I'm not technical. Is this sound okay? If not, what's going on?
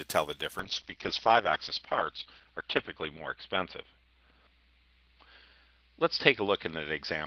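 No. From 0.62 s to the end, a call bitrate drop makes the sound muffled and rough, with detail above about 6 kHz gone, but without gaps or stutters.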